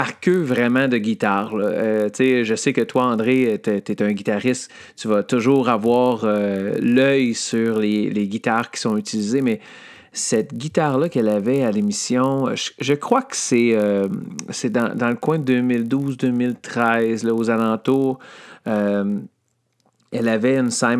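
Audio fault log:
Throughout: resampler restarted on every block. The speech carries a steady 50 Hz buzz that rides along only while there's signal and drops out in the gaps. That points to a converter going from 48 kHz down to 24 kHz and starting fresh on each 20 ms block. At every block edge it lacks the real neighbouring samples, so each boundary gets a small error, and fifty of those a second fuse into a buzz.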